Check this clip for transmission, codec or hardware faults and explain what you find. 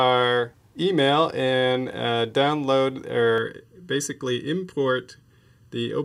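One fault is present: channel delay (comb filtering) from 3.38 s to the end. One channel runs late by about 0.7 ms before the pair is summed to mono, so shared content cancels at evenly spaced frequencies, starting near 700 Hz. The sound turns hollow and phasey, with fixed spectral notches.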